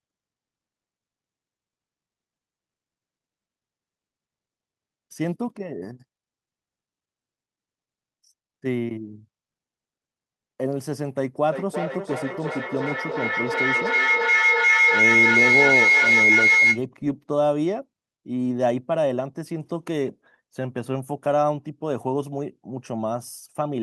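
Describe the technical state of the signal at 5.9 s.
At 5.9 s the signal is intact, with no audible dropout, distortion or other fault at that point.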